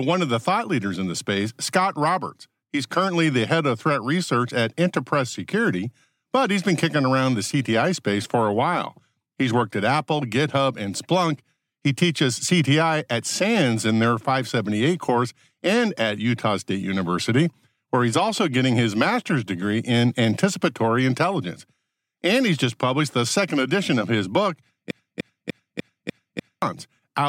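Broken-record loop, 24.91 to 26.62 s: a 0.30 s speech fragment repeats six times back to back, likely a stalled stream resending its last buffer.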